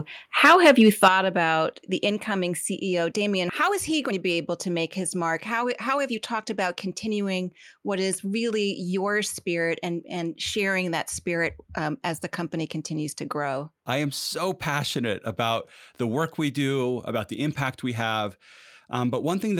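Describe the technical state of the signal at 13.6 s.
At 13.6 s the speech signal is intact, with no audible fault at that moment.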